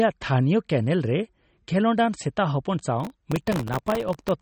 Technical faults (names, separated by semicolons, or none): MP3 compression; processor overload crackle